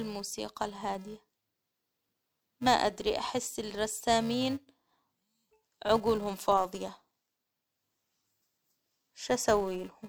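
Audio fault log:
Throughout, filter restarted on every block: each block opens from zero state with a small transient, giving a 375 Hz buzz that tracks speech level, which fits 128-sample blocks.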